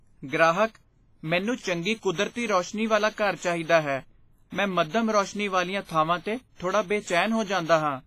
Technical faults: WMA compression

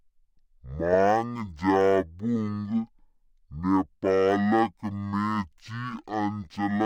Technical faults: stereo read as mono

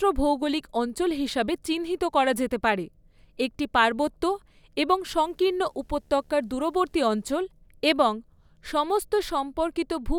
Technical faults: video or display buzz

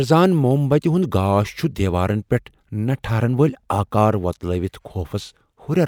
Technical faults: none

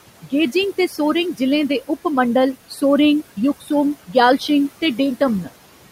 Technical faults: noise suppressor artifacts; speech cut by the noise suppressor; DC step

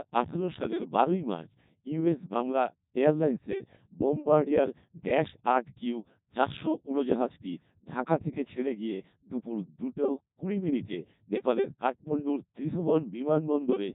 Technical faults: Codec 2 vocoder

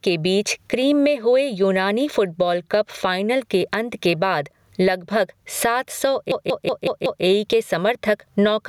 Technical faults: gain pumping; system hang loop

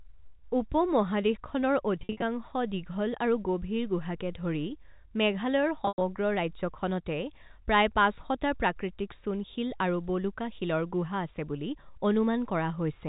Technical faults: packet loss with pitch repetition

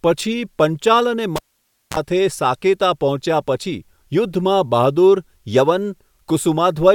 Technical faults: cable pulled and plugged in

